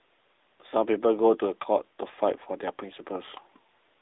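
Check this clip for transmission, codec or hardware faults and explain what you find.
One fault is present: AMR narrowband mobile codec coding across the whole clip. The speech is confined to a 300 Hz to 3.7 kHz telephone band, with nothing above 3.8 kHz. Each 20 ms frame is rebuilt from a vocal-tract model excited by sparse pulses, giving plainly audible buzzy, synthetic voicing, which fits a mid-rate AMR-NB mode around 10 kbps.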